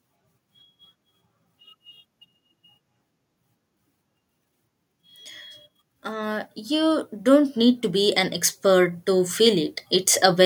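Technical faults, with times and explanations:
6.03–10.41 s, automatic gain rising: the gain control judged the input too quiet and stepped its gain up gradually, by about 8 dB over these four seconds, so the speech and the background noise swell together rather than the speech alone growing louder.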